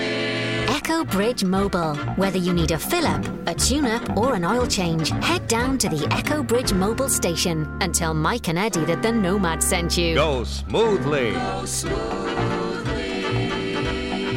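No technical faults are audible.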